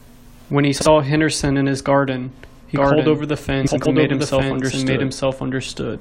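At 0.76 to 0.86 s, frames out of order swap two short blocks of about 46 ms each, producing a garbled flutter. On a spectrogram these show as vertical seams. From 2.76 s to the end, a doubled audio track adds an equally loud, dry copy about a second behind, likely from a second, slower capture path. It appears as the waveform pattern repeated and overlaid, starting abruptly. At 3.67 to 3.86 s, frames out of order recur with blocks of about 93 ms, and the spectrogram again shows discontinuous edges.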